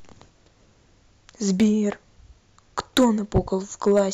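A short crackle on the peaks at 1.60 to 1.64 s marks the first hard clipping, driven about 4 dB past the limit. From 2.79 to 3.38 s the speech turns to a harsh, buzzing fuzz, overdriven by about 15 dB. A brief crackle returns at 3.87 to 4.01 s, again about 4 dB over. In each case the level exceeded what a stage could pass, so peaks were sheared flat, spraying high harmonics.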